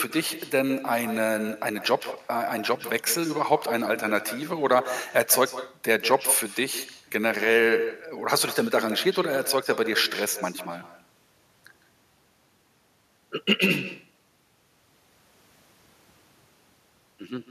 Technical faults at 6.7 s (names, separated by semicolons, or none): echo with no canceller